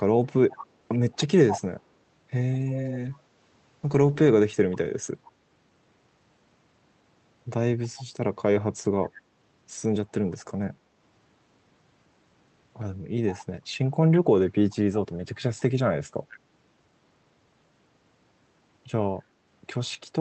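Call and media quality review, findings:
Echo leak, four events: 0.51–1.61 s (strongest, roughly 10 dB under the direct sound), 13.33–13.45 s, 14.14–14.76 s, 16.31–16.38 s (faint scraps). Delayed copy trailing the sound by a constant 143 ms, likely residual echo from a far-end loudspeaker that the echo canceller didn't fully remove. Fixed lag and discrete repeats distinguish it from room reverb, which would be a smooth decaying tail. Top end limited near 8 kHz by the call codec, as expected for this path.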